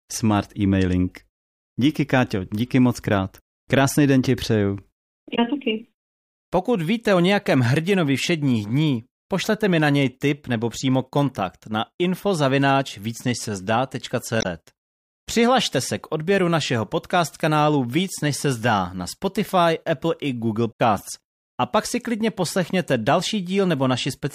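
Speech with damaged data in a compressed stream: brief glitches at 5.32–5.39 s (after "den ti přeju"), 14.38–14.46 s and 20.69–20.80 s, each a decoder losing sync, unlike clean dropouts' silence.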